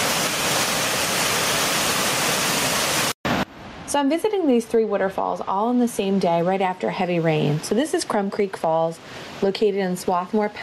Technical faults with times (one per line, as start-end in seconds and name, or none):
0.00-10.63 gain pumping
0.39-0.41 lost LE Audio frames